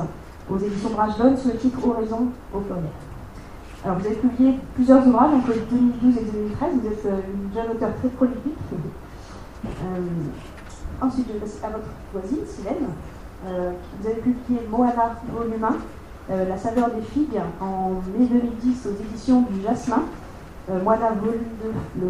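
No technical faults can be heard anywhere in this clip.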